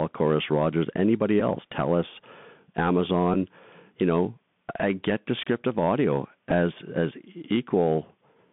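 The speech runs through a Bluetooth CVSD headset codec from start to finish. Each sample is coded as a single up-or-down bit, which fits a 64 kbit/s CVSD link, and the adaptive step cannot keep pace with loud high sounds. The band sits at roughly 150 Hz to 3.5 kHz, and the coding damage is plainly audible as granular, gritty roughness.

A Bluetooth headset packet repeat occurs at 1.40 s, 3.34 s and 6.51 s. Each time, the decoder replayed stale bits where link packets had been lost. That comes to about 11.2 ms at 1.40 s, which fits three 3.75 ms packets, and 7.5 ms at the other two. Each repeat is a brief tick or buzz. The last one falls just after "I get descriptive audio" and just before "as as".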